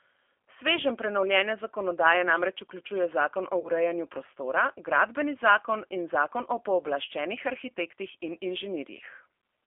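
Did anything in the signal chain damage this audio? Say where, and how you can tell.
Yes. At the codec stage, the whole clip carries G.729 coding, the G.729A variant at 8 kbit/s. The speech is band-limited to roughly 300 Hz to 3.4 kHz, and it has the slightly rough, synthetic quality of a decoder rebuilding the sound from a vocal tract filter, a pitch predictor and a few pulses per subframe. On a spectrogram, energy stops sharply near 3.4 kHz and is thin below 300 Hz, and the harmonics look smeared and grainy.

At the network stage, there is VoIP packet loss concealed by the speech codec from 3.60 to 3.69 s. About 40 ms of audio went missing, which fits two lost packets. The decoder filled the gap by repeating its last pitch and filter with falling gain, so the sound is briefly stretched and fades, and it stays weak until about 3.69 s as the decoder's state recovers. On the waveform this shows as a stretched section with a decaying envelope. 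On the spectrogram it appears as a smeared, repeated pattern that fades out.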